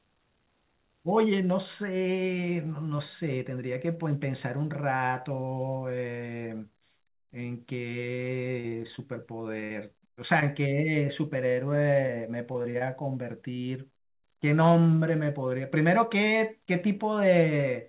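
Short concealed packet loss at 8.60, 8.68, 8.96, 9.60, 10.40 and 12.07 s: 20 to 40 ms of audio failed to arrive, and the receiver extended the preceding sound across each hole, leaving brief smears or wobbles.

Burst of packet loss at 9.64 to 9.72 s, straight after the 9.60 s gap: about 60 ms went missing, bridged by a fading continuation before the audio resumes further along.

Repeated packet loss (robotic sound) at 12.52 to 12.82 s: four gaps, the longest 40 ms, patched in quick succession so a third of the span is synthetic, giving a choppy quality.

Throughout, nothing is heard above 4 kHz, which fits a narrowband G.711-style call codec.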